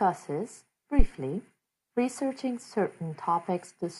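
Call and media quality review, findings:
Phantom power thump, 0.99–1.07 s: deep thud peaking about -7 dBFS, decaying within 16 ms. Supply switched on or off on live input; step passes through input coupling capacitors. Waveform: one large offset swing. Spectrogram: brief burst in lowest bins.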